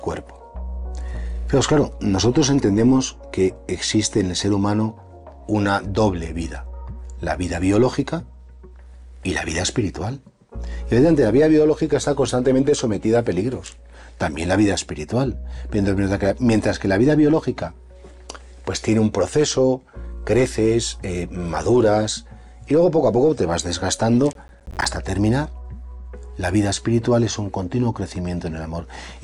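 At 24.33 s a burst of processor overload crackle begins and runs until 24.85 s, about half a second. The processor was too busy to deliver its small audio buffers on time, so a run of roughly ten deadlines was missed. Each miss leaves a short hole of silence, which fits buffers of around 10 ms, and the hard edges where the sound stops and restarts produce a gritty, tearing crackle. On the waveform the signal is chopped by flat silent gaps; a spectrogram shows thin vertical broadband streaks at each edge.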